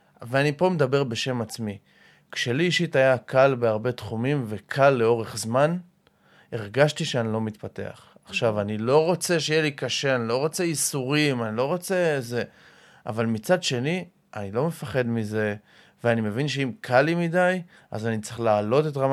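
No technical faults are audible.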